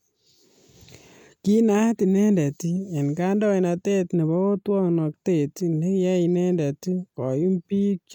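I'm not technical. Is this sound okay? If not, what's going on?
No. From 4.14 to 5.14 s, just after "inendet en kaindoinatet", there is channel delay, causing comb filtering. One side arrives a few samples late. Mixed together, the two cancel some high tones, starting near 7 kHz. The speech turns hollow.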